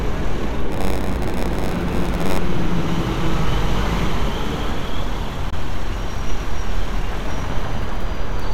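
From 0.69 to 2.38 s, a block size mismatch (padded) occurs. One stage hands over blocks shorter than the next stage reads, which fits a 512-sample read, and the missing tail of each block is filled with zeros. Those short silent gaps repeat at the block rate, so the sound carries a buzz at about 93.8 Hz. It also plays at 0.938 times normal speed, dragging slightly while its pitch stays about where it should be.

At 5.50 s, the sound drops out for about 18.7 ms, then comes back further along, as though it had kept playing through the hole. This is likely a Bluetooth dropout: a packet failed to reach the headphones in time and was discarded, which fits a single lost packet, and the output stayed silent until the next good one arrived.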